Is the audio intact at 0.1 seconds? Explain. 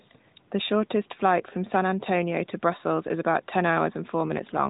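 Yes, just barely. An echo leak runs from 0.0 to 0.08 s. It sounds like a faint copy delayed by 360 ms, about 35 dB below, likely from an imperfect echo canceller.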